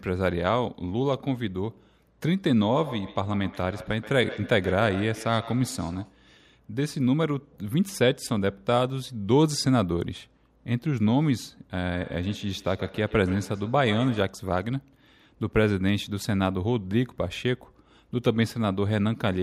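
A second device in the room replays the call into a microphone its echo canceller cannot correct, causing feedback echo between two devices from 2.75 to 6.22 s and 11.92 to 14.42 s. The speech returns roughly every 150 ms, thinner and ringing, at its loudest about 15 dB below the speech in the first stretch and 14 dB below in the second.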